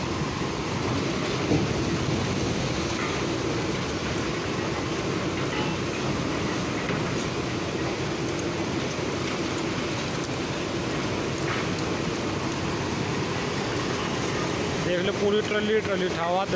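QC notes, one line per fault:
No fault to note.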